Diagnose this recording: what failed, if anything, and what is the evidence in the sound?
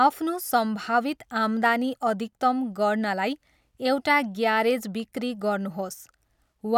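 Nothing in the speech recording points to a failure at any stage of the chain, and the signal holds steady and continuous throughout.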